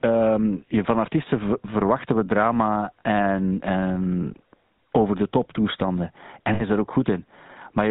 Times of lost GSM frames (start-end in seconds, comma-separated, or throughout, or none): 3.01, 6.54-6.62